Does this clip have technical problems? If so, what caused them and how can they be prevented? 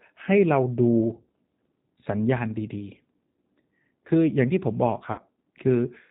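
Yes. The whole clip has been through the G.729 codec at 8 kbit/s, and the damage is plainly audible. The codec models speech as a vocal tract filter driven by a pitch predictor and a handful of pulses per 10 ms frame, and discards everything above 4 kHz, so the speech sounds dull, slightly rough and synthetic. Prevention: carry the call on a wideband codec such as G.722 or Opus when bandwidth allows.

From 5.12 to 5.22 s there is VoIP packet loss concealed by the speech codec. About 60 ms of audio went missing, which fits two lost packets. The decoder filled the gap by repeating its last pitch and filter settings at falling gain, so the sound smears into a brief buzzy tone or coloured noise that fades. Because each frame builds on the previous one, the speech stays weak for a moment after audio resumes. Prevention: reduce loss with network prioritisation for voice traffic and a suitably sized jitter buffer, or add forward error correction.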